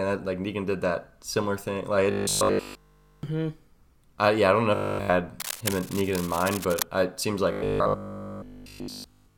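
Robotic sound from repeated short buffers appears from 2.11 to 3.23 s and again from 4.75 to 5.09 s, just after "yeah I don't know." The speech turns into a rigid, metallic buzz at 50 Hz, which fits a 20 ms buffer. This is likely because new audio arrived too seldom and the last fragment was replayed while the real audio was skipped.

Cable scratch noise follows from 5.40 to 6.82 s, ending just before "I it seems." Dense, uneven rustling sits about 10 dB below the speech. It likely comes from a worn cable, connector or control whose contact resistance fluctuated as it moved.

The robotic sound returns from 7.52 to 9.36 s, right after "I it seems," with the same 50 Hz buzz.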